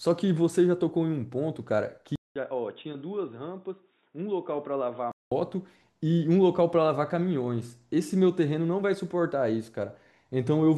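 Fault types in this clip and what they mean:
Input switched to a poorer device: a 200 ms gap, then duller, quieter sound capped at 3.8 kHz with new background noise, likely a device change rather than filtering.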